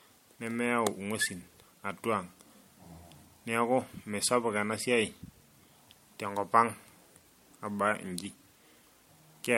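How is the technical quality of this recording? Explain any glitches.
The technical quality is degraded throughout by generation loss. Repeated MP3 re-encoding, likely around three passes at something like 64 kbit/s, stacks quantisation noise: the speech sounds swirly, hollow and smeared, with blurred attacks and nothing above 16.5 kHz.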